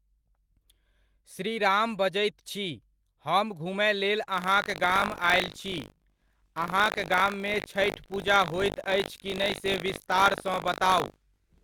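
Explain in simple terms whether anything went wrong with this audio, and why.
From 4.3 s, just after "छी हम घुमय लेल", a robotic buzz runs to the end. This is buffer tearing: playback keeps splicing in small scraps of slightly older sound.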